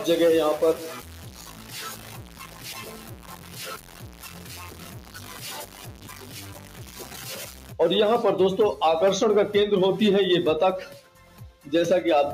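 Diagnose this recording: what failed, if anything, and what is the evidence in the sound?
A speech-tuned noise suppressor was applied to music or sounds, at the call-processing stage. It runs throughout. Sustained parts and tails are pulled down while attacks pass. The level swings by roughly 10 dB, so the sound pumps and thins.

From 0.0 to 7.72 s the sound is coarse and grainy. The grit follows the signal, sitting only about 10 dB below it. This points to low bit depth without dither at sample-format conversion, likely a truncation to about 3 bits.

The noise suppressor also cut individual sounds, taking them for noise. Drops of about 4 dB occur at 2.32 to 2.63 s, 3.85 to 4.01 s and 6.59 to 6.79 s. The deepest, about 5 dB, is at 11.01 to 11.66 s. Held portions sink there.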